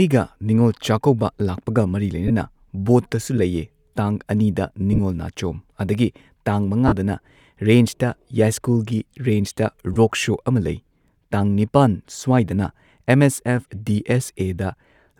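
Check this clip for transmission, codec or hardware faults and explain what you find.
There's one real problem: four short dropouts where Bluetooth LE Audio frames went missing, at 2.28–2.31 s, 4.93–4.99 s, 6.87–6.92 s and 9.94–9.97 s. The LC3 decoder fills each gap by replaying the last spectrum with scrambled phase, so the speech briefly turns into a grainy, noisy smear instead of going silent. The first and last gaps are about 22 ms, the third about 45 ms, and the second is about 38 ms of loss scattered over 60 ms in short bursts.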